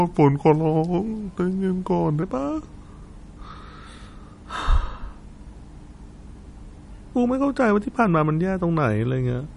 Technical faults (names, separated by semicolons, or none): MP3 compression; section at the wrong speed